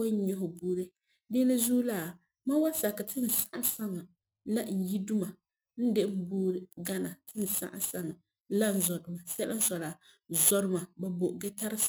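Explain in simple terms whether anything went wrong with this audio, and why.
Something went wrong throughout this speech clip. It has crude rate conversion. The audio's speed of samples was changed cheaply, by grabbing the nearest sample instead of filtering. The result is a fairly clear gritty, tuneless fizz on loud and bright sounds, which fits a 48 kHz to 44.1 kHz change.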